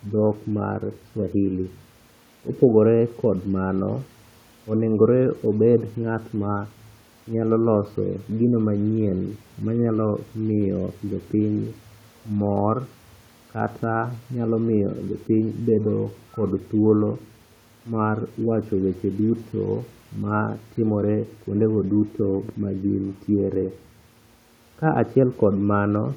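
Nothing in this speech clip stood out on listening, and the faint room noise, about 35 dB below the speech, is simply part of the recorded space.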